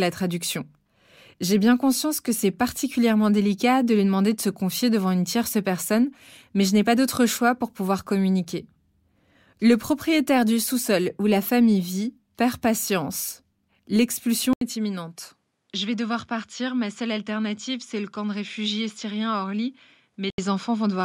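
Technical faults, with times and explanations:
14.53 to 20.38 s, input switched to a poorer device: after a silence of 80 ms the speech turns duller, with nothing above 13 kHz, drops roughly 5 dB in level, and carries a new, faint background noise well below the voice. The likely cause is the recording switching mid-take to a different, more limited microphone path, whose narrower band, lower gain and own noise floor replace the original until the sound clears again at 20.38 s.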